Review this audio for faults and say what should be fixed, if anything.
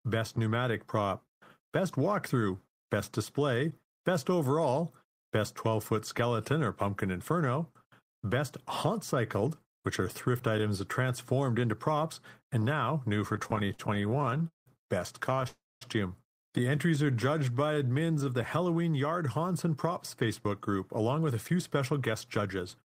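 Between 13.33 and 14.68 s, right after "props and now new", there's repeated stalls (stutter): 23 little hiccups where packets showed up late, the jitter buffer kept running dry, and the receiver stretched the last sound to fill about 0.43 s, the longest hold 179 ms. That's a third of the stretch. A shorter burst follows at 15.30 to 15.46 s, four tiny gaps, none over 15 ms.

Right after that, from 15.48 to 15.83 s, the sound hangs and trails off into about 0.22 s of silence before picking up where it left off, adding roughly a third of a second. That's a call audio freeze, likely from packets held up in the network until the buffer emptied.

From 16.98 to 18.24 s, just before "of the", you get a jitter buffer slow-down. The receiver repeated pitch periods to rebuild its reserve, so the audio plays at about 88% speed at the same pitch and drags by 163 ms.

Then from 20.28 s to the end there's a jitter buffer speed-up. 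The buffer was holding more than it aims for, so it snipped short pitch-period pieces, about 150 ms in all, and the audio runs around 6% fast and sounds a bit hurried.

To prevent all of this, steady the network path with QoS priority for the voice packets and less competing traffic, and give the jitter buffer a bit more headroom so it adapts more gently.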